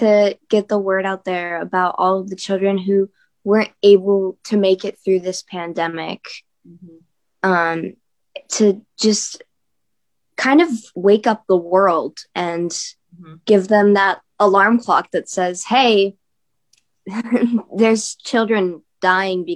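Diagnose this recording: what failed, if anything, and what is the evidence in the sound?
Nothing failed in this recording, and the sound gives no evidence of a fault.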